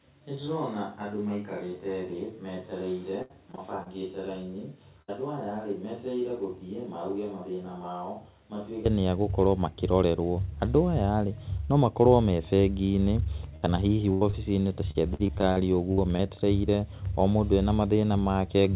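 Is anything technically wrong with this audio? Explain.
Yes, there are several faults.

From the start until 8.86 s the sound is roomy and hollow, thin in the bass, about 10 dB quieter than afterwards, with more room noise. Then it snaps back to a close, full sound. The likely cause is a switch to a distant microphone: the close microphone's feed was missing, so a far-off one captured the speech along with the room's reflections.

Two stretches turn choppy, from 3.22 to 3.88 s and from 14.91 to 16.21 s. This is repeated packet loss (robotic sound). Gaps of up to about 76 ms in the first stretch and 51 ms in the second arrive one after another. Each gap is patched by extending the last bit of sound, so roughly a fifth of each stretch is synthetic filler and pieces of speech are lost.

At 5.02 to 5.10 s, 13.56 to 13.67 s and 14.13 to 14.23 s the speech briefly freezes into a held buzz or fading hiss, then jumps ahead. 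Each is a burst of packet loss. Between 60 and 80 ms of audio never arrived, and the receiver stretched the previous sound and faded it down before resuming later in the speech.

At 14.31 to 14.35 s there is a quick smear, lasting only about 20 ms. This is short concealed packet loss. A short piece of audio went missing and was filled by continuing the preceding sound, then blended back into the real signal. All of this passes through a telephone-band G.711 call path that carries nothing above 4 kHz.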